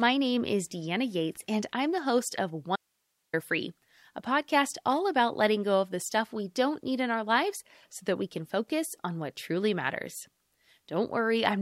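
Shifting load from the computer's processor, graphics card or mouse is disturbing the shared ground of the audio circuit from 0 to 2.0 s, just before "host of". The result is computer activity noise: a buzzy pulsing at around 70 Hz, roughly 40 dB below the speech, that follows the machine's activity rather than the talking.

From 2.76 to 3.33 s, right after "host of", the wanted signal likely vanished upstream while the rest of the path stayed live, producing an audio dropout to a faint residue. For 0.57 s the speech cuts out abruptly, leaving only hiss about 50 dB down.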